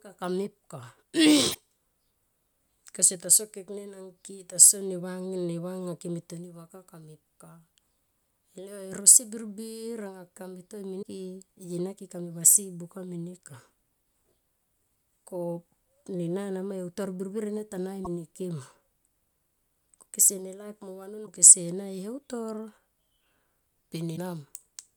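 Short glitches, each about 50 ms, break into the speech at 1.50–1.56, 10.99–11.03, 18.01–18.07, 21.23–21.28 and 24.13–24.18 s. They come from damaged data in the compressed stream: corrupted frames are misread, and the decoder loses sync until it finds the next valid frame header.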